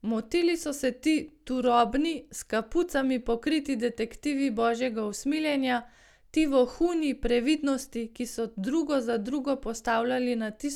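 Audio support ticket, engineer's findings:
No faults found in the speech recording. Nothing heard that needs follow-up on this ticket.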